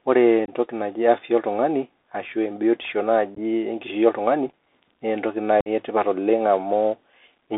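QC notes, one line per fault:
throughout, Bluetooth CVSD headset codec: one-bit slope coding, consistent with a 64 kbps link, confines sound to 300 Hz–3.6 kHz; the spectrogram shows a hard ceiling, granular hiss floor, and scratchy overloaded sibilants.
0.46–0.50 s, 3.35–3.38 s, 4.49 s, 5.61–5.68 s, unconcealed Bluetooth headset packet loss: lost packets leave abrupt flat gaps in the waveform, totalling 22.5, 18.8, 18.8 and 52.5 ms. Losses near 3.35 s and 4.49 s are scattered over 30 and 45 ms, giving chopped crackle. The sound returns briefly quieter as the CVSD step size rebuilds.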